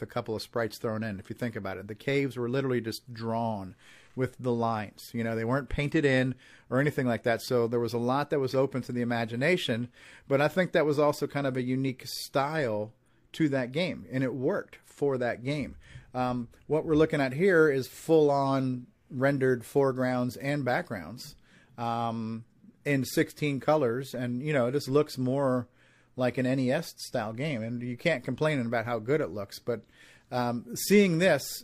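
Nothing stood out on listening to this speech recording.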